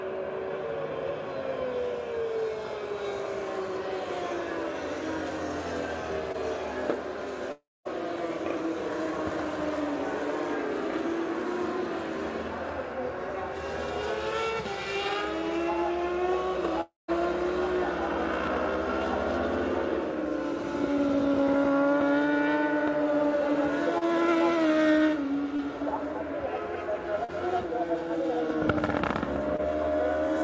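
Call audio carried over a band-limited codec path, with nothing above 8 kHz, which fits G.722 at 64 kbps. It has short concealed packet loss at 6.32 to 6.36 s, 23.98 to 24.09 s, 25.56 to 25.60 s, 27.24 to 27.30 s and 29.56 to 29.60 s. Each gap lasts 20 to 40 ms. The receiver papered over it by extending the preceding sound, then blended back in. The result is a brief smear or wobble. Two longer holes follow a different pattern, at 7.52 to 7.87 s and 16.81 to 17.10 s. The last sound is stretched into a fading buzz or hiss. Then it drops to silence for about a fifth of a second. The audio resumes with that stretch missing. The likely cause is a long network dropout.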